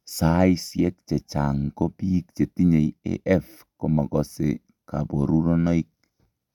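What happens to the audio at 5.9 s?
Nothing goes wrong at 5.9 s: the speech carries on intact through that moment, with no dropout, click, distortion or other fault.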